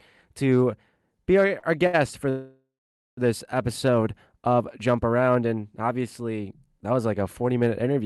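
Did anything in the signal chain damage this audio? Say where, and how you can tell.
Yes. The damage happens at the network and jitter-buffer stage of the call path.

Short stalls from late packets occur at 1.47–1.51 s, 1.59–1.65 s and 1.87–1.95 s, holding the sound for 15, 38 and 67 ms. In each one, a packet hadn't arrived on time and the jitter buffer ran dry. The receiver stretched the last bit of sound, giving a brief held, slightly buzzy smear. When the packet arrived, playback resumed where it had left off, so nothing is lost, only delayed.

A call audio freeze runs from 2.29 to 3.19 s, almost a second long. The last sound continues as a fading buzz and then becomes about half a second of silence. After that, the audio picks up exactly where it stopped, so a gap has been inserted rather than content cut. This is likely packets being held up in transit while the buffer sat empty. The Opus coding beneath it rolls off above 12 kHz, as this codec setting does.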